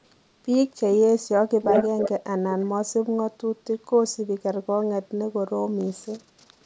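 From 1.62 to 2.1 s, a copy of the speech returns about 0.33 s late at roughly the original level, likely an echo leak from a loudspeaker the canceller missed; spectrograms show duplicated, time-shifted harmonic patterns.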